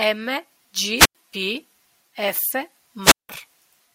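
A speech clip with two wireless microphone squelch dropouts, 0.96–1.15 s and 3.02–3.29 s, muting about 94 and 177 ms; the hiss swelling before each hole distinguishes them from plain digital gaps.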